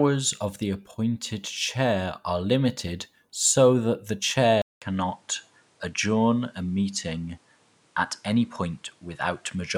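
After "limited so that the", at 4.62 s, the input likely switched to a poorer device. A 200 ms gap follows. Nothing above 11.4 kHz remains afterwards.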